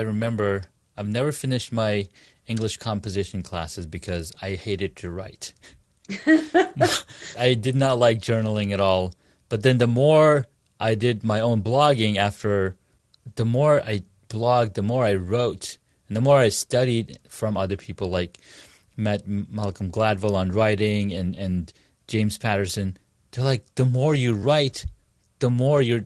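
No faults can be heard in the speech; it arrives through an Opus-coded call path with a jitter buffer, which carries the codec's ordinary coding texture and a top end that stops at about 12 kHz.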